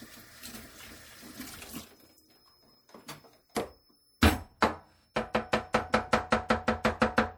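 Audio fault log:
Throughout, MP3 compression. Faint detail swirls and chirps. The damage is plainly audible, likely from a low bitrate near 64 kbps.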